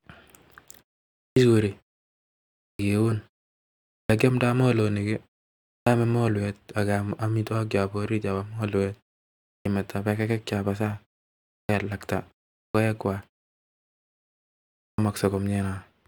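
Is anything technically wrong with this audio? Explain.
Yes. The speech has a clipped start after a pause, eight times: at 1.25, 2.69, 3.98, 5.76, 9.54, 11.58, 12.63 and 14.86 s. In each case the output device has gone idle during a preceding gap of 0.39 to 1.65 s and has to wake or re-lock before playing again, so the first 100 to 120 ms of the returning sound never reaches the listener. Each word that follows therefore bursts out of silence already underway, its opening sounds cut away.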